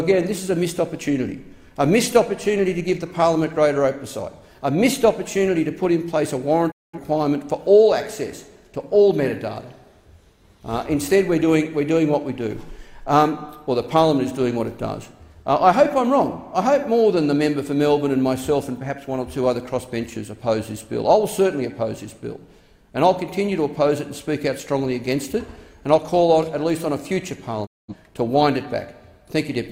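At 6.7 to 6.99 s and again at 27.65 to 27.94 s, a digital broadcast dropout mutes the audio. A quick fade of about 20 ms leads into clean silence, which fits roughly five failed frames, and the sound resumes later in the programme rather than catching up, unlike a buffer stall.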